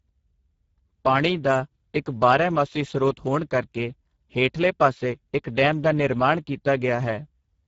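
From start to end, the speech carries plainly audible Speex codec damage. It sounds hoarse and noisy, which fits a low bitrate near 10 kbps. Nothing reaches above 7.7 kHz.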